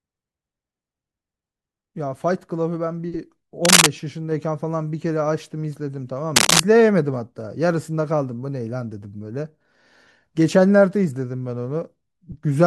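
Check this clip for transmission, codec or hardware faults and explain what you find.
A hardware fault shows up twice in the speech, as cable scratch noise from about 3.63 to 3.87 s and again from about 6.36 to 6.60 s. The likely cause is a worn cable, connector or control being moved, so its contact resistance jumps rapidly and injects dense, irregular bursts of noise into the signal. Each episode lasts roughly a quarter of a second and sits a little above the speech level, heard as a brief scratching rustle over the voice.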